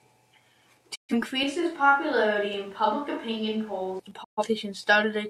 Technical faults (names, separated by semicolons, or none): digital broadcast dropout; switch to a distant microphone; repeated buffer